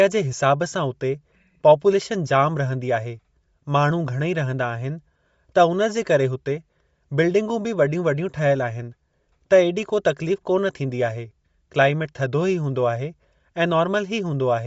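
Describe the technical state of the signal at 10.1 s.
Bluetooth LC3 compression is present at 10.1 s and throughout the clip. Nothing reaches above 7.7 kHz, and the speech has a plainly audible breathy, grainy edge. This likely comes from a transform codec replacing discarded upper spectrum with noise, consistent with LC3 at about 32 kbps.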